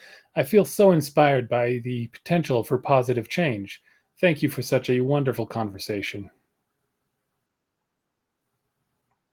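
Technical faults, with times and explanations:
Throughout: clock drift between sender and receiver. The sending side's clock runs slow, roughly 2 percent behind the receiver's, so audio arrives a touch slower than it's played out. The jitter buffer keeps drifting toward empty, and the receiver has to keep patching the gap. You don't hear the drift as such. What you hear is the fallout: small, irregular timing wobbles scattered across the speech rather than one clean glitch.
0.28 to 8.28 s: repeated timing corrections. To make up for that slow sender, the receiver keeps stretching the stream by repeating tiny slices, so across this stretch it plays at about 98 percent speed and adds something like 150 ms in total. The edits all lengthen the audio but land at uneven spacing. That's why any audible trace is faint hiccups and an unsteady pace instead of a smooth rhythm.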